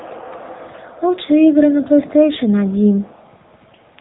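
From start to finish the speech sounds buzzy and synthetic, with nothing above 3.9 kHz, the mark of the AMR narrowband mobile codec. Its pulse-driven vocal-tract model is plainly audible here, which fits a low rate near 8 kbps.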